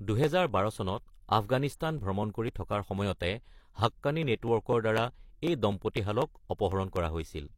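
Periodic USB or driver dropouts run from 0.24 s to 7.46 s: roughly every 0.25 s something stalls the audio path and about a millisecond of the speech is skipped outright. Each splice that falls during speech lands as a tick, repeating evenly across the clip.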